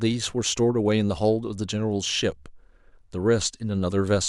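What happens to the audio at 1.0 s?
Nothing goes wrong at 1.0 s; the speech carries on intact through that moment.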